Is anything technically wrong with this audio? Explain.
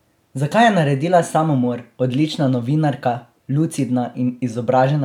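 No, no technical faults here.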